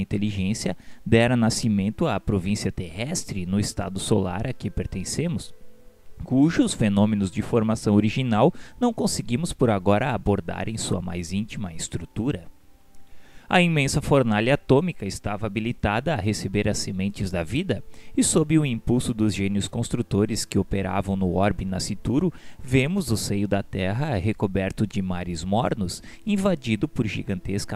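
No technical faults turn up anywhere in this one, so there's nothing to flag from the first moment to the last.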